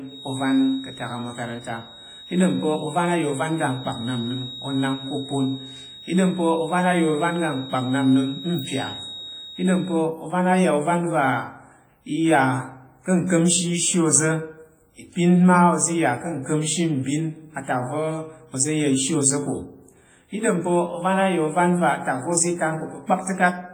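A speech recording carries heavy codec damage from start to finish: the voice rings and sounds washy, smeared over tens of milliseconds, with a hiss that rises and falls with the talker. That is likely WMA compression, a transform codec using long blocks that spreads quantisation noise in time and discards weak spectral lines, which fits a low bitrate of around 24 kbps. From 0.0 s to 10.07 s, ending just before "ovan a’ ya’ ovan", a thin single-pitch whistle near 3.8 kHz sits behind the speech, roughly 20 dB down, slowly swelling and fading. This is likely a feedback whistle, with the loudspeaker-to-microphone loop held just short of instability so that one frequency keeps ringing without ever building into a howl.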